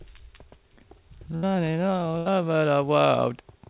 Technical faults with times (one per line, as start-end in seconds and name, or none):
1.36-1.45 burst of packet loss
2.18-2.28 burst of packet loss